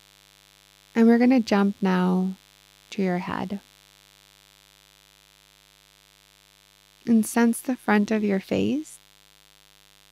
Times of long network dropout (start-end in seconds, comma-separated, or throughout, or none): none